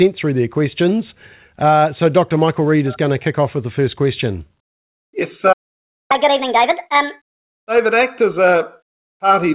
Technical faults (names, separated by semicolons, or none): playback stall; catch-up at higher speed